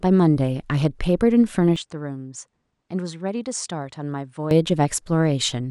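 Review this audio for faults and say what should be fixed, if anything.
From 1.76 to 4.51 s the speech turns duller and about 10 dB quieter, with a faint new noise floor well below it, likely an input switched to a poorer device. A spectrogram shows nothing above 9.8 kHz there, and the waveform visibly shrinks. Locking the input device before recording prevents this.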